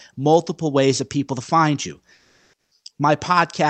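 Just after "people to find you", from 2.13 to 2.71 s, the faint background becomes a flat, featureless hiss, shifted in level by about 3 dB. This is comfort noise in place of the background, likely from discontinuous transmission: the sender paused, and the receiver synthesised stand-in noise.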